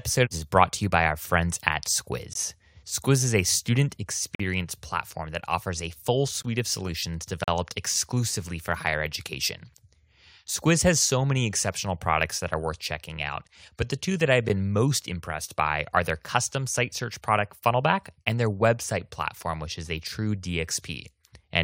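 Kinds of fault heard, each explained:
Gap between stream segments: hard-edged silent holes of roughly 7 to 45 ms cut the speech near one-second segment boundaries, showing as flat waveform gaps and full-height blank columns on a spectrogram.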